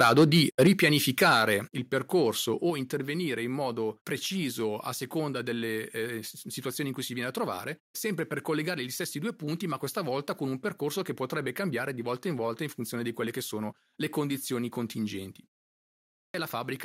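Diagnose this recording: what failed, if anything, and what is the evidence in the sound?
Microphone overload at the converter: flat-topped, crackling peaks at 0.0–0.69 s and 1.22–1.42 s, about 6 dB and 3 dB over. Likely input gain set too high, unlike codec distortion.

Microphone volume stepped down in call processing: sudden drops of about 3, 6 and 4 dB at 0.67, 1.68 and 2.7 s, the first two at or just after overloads. Voice and background fall together, not gradually, likely automatic gain reduction.

Clipped start after a pause at playback: after "sono le condizioni contingenti" and a 0.36 s pause, about 0.58 s of speech is lost at 15.76–16.34 s. The likely cause is the output device waking late.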